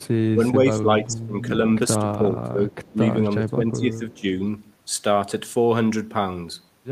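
A speech recording with an echo leak at 0.00–0.07 s and 2.84–2.92 s: faint copies, roughly 30 and 35 dB down, trailing the voice by 387 ms, likely residual loudspeaker echo. They appear as pale, delayed smears on a spectrogram. Speech suppressed in double talk occurs at 0.33–1.46 s, 1.98–2.74 s and 2.93–4.26 s, likely an echo canceller ducking overlapping talk. The waveform envelope sags by up to about 20 dB in patches.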